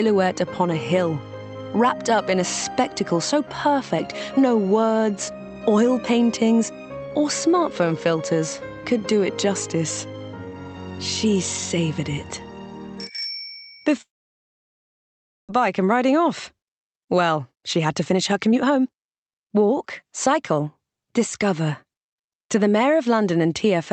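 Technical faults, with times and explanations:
14.01–15.51 s, long network dropout: the sound breaks off, a short fading continuation of the last sound gives way to about 1.4 s of silence, and the audio resumes with roughly a second of material missing. That points to likely lost packets. Unlike a brief glitch, the gap is long, and the sound picks up later rather than where it stopped.
17.11–20.59 s, jitter buffer speed-up: the audio runs about 13% fast at unchanged pitch, sounding hurried. Short pitch-period pieces are trimmed repeatedly to shed roughly half a second of backlog. Unlike resampling, the pitch does not rise.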